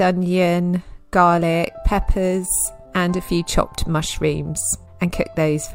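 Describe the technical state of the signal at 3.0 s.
At 3.0 s the signal is intact, with no audible fault at that moment.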